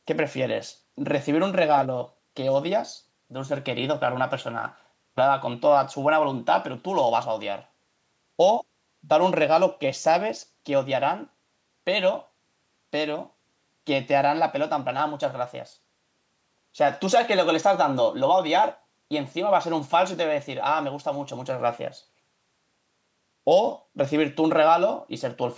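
No technical faults can be heard in this speech. It carries the signature of call microphone processing, with the lowest bass trimmed away and nothing above 8 kHz, which is that path working as intended.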